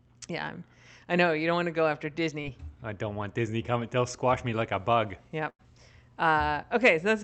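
Speech carried over a call path whose Opus coding rolls off the top end around 8 kHz. At 2.41 to 2.45 s, between "want to go after" and "I don't want", a brief smear blurs the sound: short concealed packet loss, where about 20 ms never arrived and the decoder patched the hole by extending the preceding sound. At 5.49 to 5.61 s, right after "me like a bug", the sound stretches into a held, fading tail and then jumps ahead: a burst of packet loss dropped about 100 ms, which the receiver bridged by continuing and turning down the last sound.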